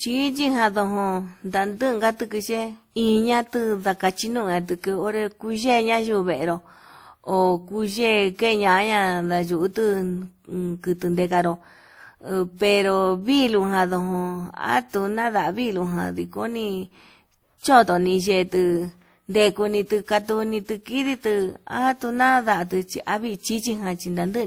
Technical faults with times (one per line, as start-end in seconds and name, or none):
0.00-24.46 transcoding between lossy codecs